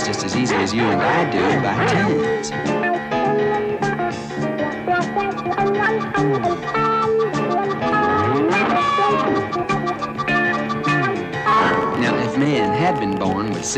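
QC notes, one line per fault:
11.74–13.71 s, train of clicks: about thirty similar ticks at roughly 13.8 per second, unevenly spaced and about as loud as the sound itself. They are likely from interference or a faulty connection. They appear as thin vertical broadband lines on a spectrogram and narrow spikes on the waveform.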